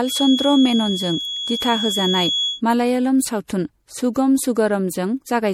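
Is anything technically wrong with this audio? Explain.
Yes, two faults. Throughout the speech there is generation loss, likely from repeated MP3 coding at something like 64 kbit/s, re-encoded a few times. The result is swirly, hollow and smeared, with blurred attacks and nothing above 16.2 kHz, worse than a single pass would sound. From 0 to 2.62 s a feedback whistle sits at 3.4 kHz, about 5 dB below the speech, likely from a loop held just short of runaway. It swells and fades slowly but never builds up the way true howling would.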